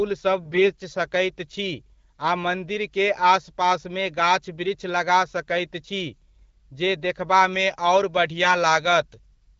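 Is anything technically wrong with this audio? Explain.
Yes, there are two faults.

AMR bit errors, from 0.44 to 0.71 s, just before "सकैत छी". A poor link corrupted some of the weakly protected bits in the speech frames, roughly 7 percent, while the check on the critical bits still passed. The decoder therefore placed excitation pulses wrongly and used slightly wrong pitch, gain and spectral values. Pitch and loudness hold roughly steady, but the voice turns hoarse, scratchy and gargly for that short stretch.

Pre-emphasis left on, from 7.53 s to the end of the clip. The treble was lifted for transmission and the matching de-emphasis cut was never applied. The tilt fits a 75-microsecond FM curve, leaving about 13 dB more level at 10 kHz than at 1 kHz. The speech sounds thin, overly bright and sibilant. The AMR wideband coding underneath adds only light coding damage.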